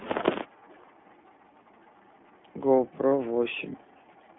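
It's a speech clip, and the whole thing has gone through the iLBC codec. The line is squeezed into roughly 200 Hz to 3.5 kHz, with nothing up top, and the voice has that plainly audible rough, slightly synthetic edge. That fits the 15.2 kbps mode with 20 ms frames, each coded on its own. From 0.68 to 0.86 s there's a faint second copy of the voice trailing about 243 ms behind, sitting roughly 30 dB down. That's likely an echo leak, where a loudspeaker on the far end was picked up by its mic and not fully cancelled. Then at 3.08 to 3.12 s there's a 40 ms spot of lost iLBC frames, which fits two dropped 20 ms frames. The decoder fills it by repeating the last pitch cycle with some noise, so you hear a brief held, buzzy vowel before the voice snaps straight back.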